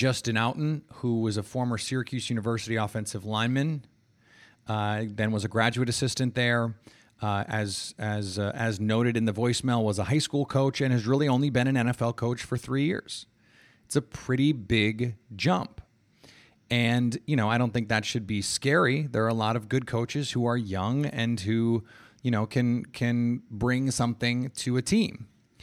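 No technical faults are audible.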